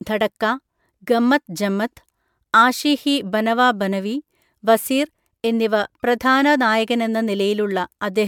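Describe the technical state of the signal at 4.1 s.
At 4.1 s the speech shows generation loss, present across the whole clip rather than at that moment alone. The likely cause is repeated lossy MP3 coding, about five passes, each re-quantising on a shifted frame grid so errors and spectral gaps stack up. The result is a swirly, hollow, smeared texture with softened consonant attacks, worse than a single encode near 140 kbit/s would suggest, and nothing is present above 19.8 kHz.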